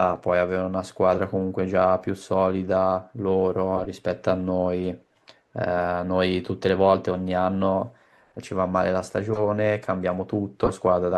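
Short chirping bursts of noise cut across the speech four times: at 1.13 to 1.20 s and 3.77 to 3.86 s, peaking at about -15 dBFS, then louder at 9.30 to 9.41 s and 10.63 to 10.70 s, reaching about -10 dBFS. Each is a corrupt frame decoded. Flipped bits in the compressed stream were played anyway, so misread gains and codes put energy at wrong frequencies for the span of a few damaged frames.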